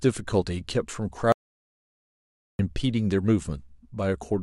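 An audio dropout to silence runs from 1.32 s to 2.59 s, swallowing about 1.27 s of the speech. The speech stops abruptly mid-flow and the gap is dead silence, with no room tone or background left underneath, before the voice resumes just as suddenly. That kind of total blank most likely means the input signal was lost, through a dropped connection or an accidental mute, while recording carried on writing silence.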